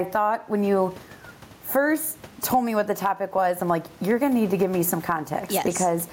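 Across the whole speech clip the input gain sits far too high for the microphone, and a fast limiter or compressor is likely clamping it down whenever the talker gets loud. That produces gain pumping: the level swings by roughly 15 dB, and the room noise sits about 36 dB below the speech. Loud and quiet passages are pressed close together, leaving the speech sounding squashed.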